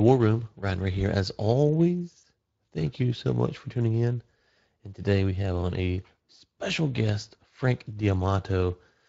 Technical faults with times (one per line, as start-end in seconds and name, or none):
0.00-9.08 Speex codec
2.21-2.25 VoIP packet loss concealed by the speech codec